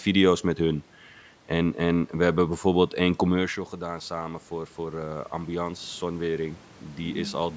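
Right after "hebben bijvoorbeeld één commercial", around 3.5 s, the talker drops away from the mic by about 12 dB, and from 3.8 s to 7.45 s the automatic gain rising kicks in, slowly pushing level up about 5 dB. The voice and room noise swell together.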